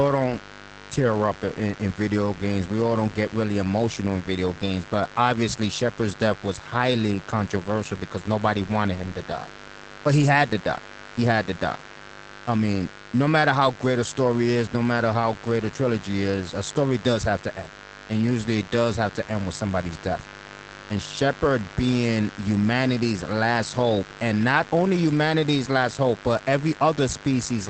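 From start to finish there's a mains buzz riding under the speech, a steady, raspy drone built on 50 Hz. It's not a clean hum. Something like a dimmer or a rectifier, or a cable without proper shielding, is letting sharp switching spikes into the signal twice per mains cycle, and those spikes stack up harmonics well into the kilohertz range. It sits roughly 20 dB below the speech.

The whole clip also carries plainly audible Opus voice compression. The speech has that muffled, slightly hoarse, faintly robotic quality you get when the SILK linear-prediction coder is squeezed hard and the excitation gets coded coarsely. Nothing comes through above about 8.6 kHz, which fits wideband mode, and the amount of damage points to a bitrate around 12 kbps.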